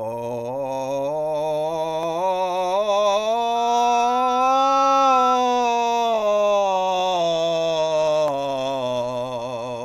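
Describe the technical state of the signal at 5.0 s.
At 5.0 s the microphone is picking up the loudspeaker it feeds, and around 1.3 kHz the loop gain has passed one. This loudspeaker feedback squeal runs from 3.55 to 5.43 s, swelling over about one and a half seconds into a steady tone about 5 dB above the music.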